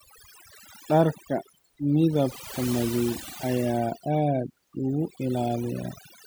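Overdone noise removal runs through the whole clip. The noise reduction was set so aggressively that frequency bands close to its noise estimate are pushed almost to silence, taking the quieter parts of the speech with them. Gaps turn near-silent with twinkling specks.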